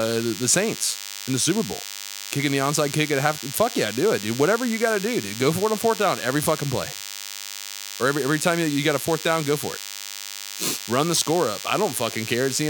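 DECT cordless phone buzz runs through the whole of this speech clip: a thin, steady 100 Hz buzz rich in harmonics, sitting only about 10 dB below the speech. A nearby DECT handset or base transmits a radio burst every 10 ms, and the audio circuitry rectifies it.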